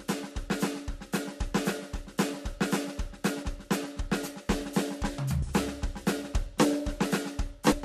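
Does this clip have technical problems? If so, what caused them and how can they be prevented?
Yes. The music has damaged data in a compressed stream, heard as short blips at 3.42 s, 5.41 s and 7.71–7.73 s. Corrupted bytes there cause the decoder to misread frames, lose sync and search for the next frame header. Checksum-verified transfers and storage prevent it.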